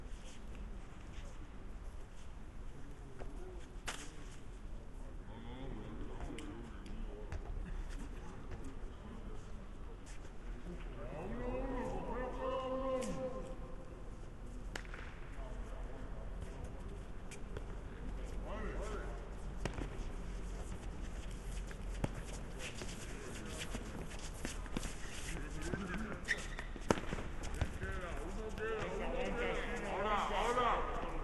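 A recording of everyday sounds with a wrong sample rate throughout. Everything plays at 0.726 times normal speed and about 5.55 semitones low, which fits 44.1 kHz audio played at 32 kHz. On a spectrogram, all frequencies sit proportionally lower, and the waveform's events look stretched out in time.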